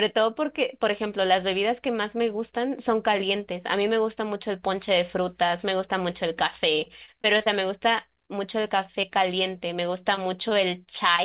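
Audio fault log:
6.84–7.48 s, repeated packet loss (robotic sound): five gaps in quick succession, the longest 22 ms, each patched by extending the preceding sound, so about 16% of the stretch is synthetic and the speech turns choppy and robotic.
8.26–8.30 s and 9.01–9.05 s, short concealed packet loss: about 20 ms missing each time, filled by continuing the previous sound and blending back in, which is heard as a brief smear or wobble.
10.15–11.20 s, scattered short gaps: roughly four isolated dropouts, the longest around 20 ms, each concealed by carrying the prior sound forward, which leaves small ticks and hiccups scattered through the speech.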